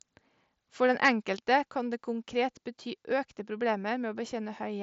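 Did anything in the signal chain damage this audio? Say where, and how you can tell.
Yes. From 1.04 to 1.09 s a loud peak turns harsh and crackly, its tops flattened about 5 dB past the converter's limit across roughly one sample in twenty. This is microphone overload at the converter stage, likely from an input volume set too high.

At 1.23 s, right before "kan det konkret bety", the whole level, voice and background together, drops abruptly by about 4 dB and stays there. That is the microphone volume stepped down by call processing, likely reacting to the clipped peak just before.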